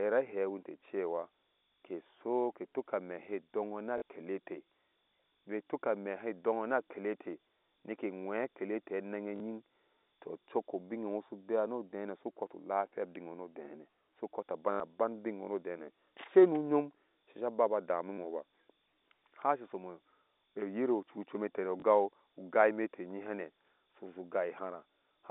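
At 3.98 s after "na a", 9.36 s, 14.72 s, 18.14 s after "ba aba dami", and 21.8 s, packet loss with the last packet repeated replays earlier audio for 40, 40, 80, 40 and 20 ms. This gives a robotic stutter, or a small blip for the single 20 ms repeat, seen as duplicated waveform blocks.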